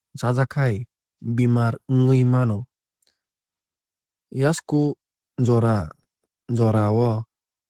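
Throughout the speech, Opus voice compression is plainly audible. The codec is running in hybrid mode: a linear-prediction coder handles the band up to 8 kHz, and a transform layer covers the range above it. The band stays fullband, with content reaching up to 20.2 kHz. The excitation is coded coarsely, which leaves the speech hoarse and slightly robotic. The codec runs at 16 kbps with 20 ms frames.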